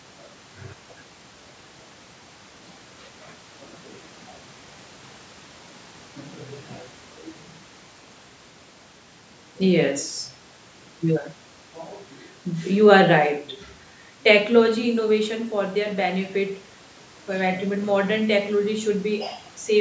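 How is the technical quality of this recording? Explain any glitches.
The technical quality of this recording is sound, with no glitches to explain.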